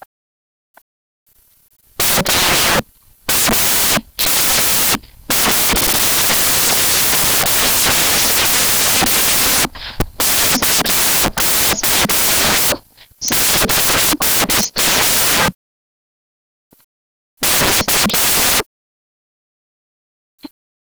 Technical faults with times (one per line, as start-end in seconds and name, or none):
0.00-20.87 samples built from the wrong bytes